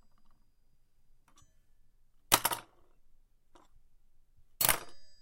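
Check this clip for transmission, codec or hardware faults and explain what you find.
No transmission, codec or hardware faults.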